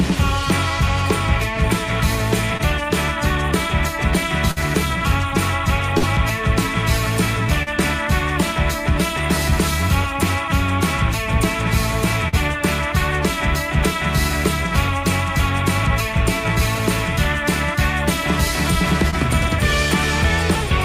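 At 2.57 s comes the first short concealed packet loss. About 20 ms of audio never arrived in time. The receiver bridged the hole by extending the last sound, then blended back. It is heard as a brief smear. The same fault returns at 7.63 s, 12.28 s and 19.10 s. The middle two each cover about 40 ms. The last is tiny again.

At 4.51 s there is a burst of packet loss. About 40 ms of audio is gone. The receiver continued the preceding sound for 50 ms while fading it down. A voiced stretch becomes a short held buzz. Noisier material becomes a dying hiss. Then the sound resumes, with the lost part skipped. A second burst hits at 5.98 s, with about 40 ms missing and 46 ms of fill. It gives the same stalled, faded gap.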